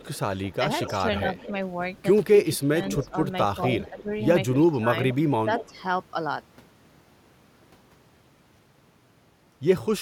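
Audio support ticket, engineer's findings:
Delayed copy of the speech trailing by about 230 ms at 0.0–1.51 s, 2.37–3.07 s, 3.63–4.57 s and 5.10–5.81 s. It is loudest near 2.4–3.1 s (about 5 dB under the direct speech) and around 10–15 dB down elsewhere. Echo leak, likely from the far end's loudspeaker pickup getting past its echo canceller.

Speech dips and thins in patches over 2.43–3.09 s, 3.74–4.08 s and 4.72–5.51 s, dropping by up to roughly 15 dB. Speech suppressed in double talk, likely from the canceller ducking both talkers during overlap.

Crackle, then a dropout of about 0.2 s from 8.54 to 8.82 s, with clicks at the edges. Intermittent contact: a loose cable or plug opening the line momentarily.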